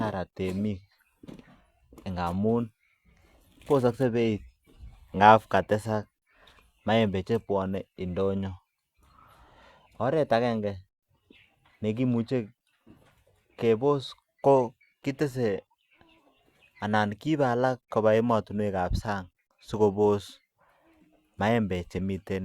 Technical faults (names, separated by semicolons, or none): none